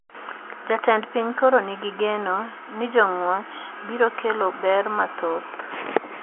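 No technical faults can be heard in this speech.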